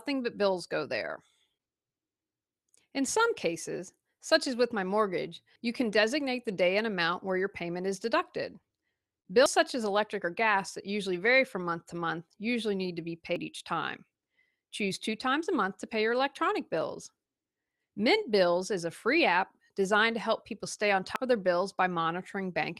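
The audio has abrupt skips at 5.56, 9.46, 13.36 and 21.16 s, each dropping about a tenth of a second with the two sides butted together. This is likely audio missing between chunks: a roughly 4-second processing block loses a piece at each handover.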